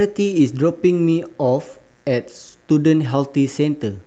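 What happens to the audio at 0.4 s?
Right around 0.39 s there's a lost packet rebuilt from error correction. One chunk of the Opus stream went missing, but the next packet carried a low-bitrate backup copy of it, and the decoder played that instead of leaving a hole. So there's no dropout, just a brief patch of speech, about 20 ms, which fits a single lost packet, that sounds a bit rougher and noisier than what surrounds it.

Under all of that, including this moment, there's a steady mains buzz. It's a raspy hum built on 60 Hz and its harmonics, the kind you get when sharp switching spikes from a dimmer, rectifier or poor shielding get in twice per mains cycle. It sits well below the speech, roughly 40 dB down, so it's faint but constant.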